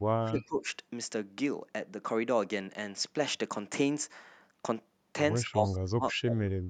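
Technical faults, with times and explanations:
0.21–0.66 s and 5.43–6.61 s, speech suppressed in double talk: level sags about 20 dB, then about 35 dB, visible as waveform troughs; likely an echo canceller ducking overlapping talk.
0.39–0.43 s and 6.08–6.13 s, echo leak: a faint copy about 25 dB down, 206 ms late, likely residual loudspeaker echo, showing as a brief ghost of earlier spectrogram energy.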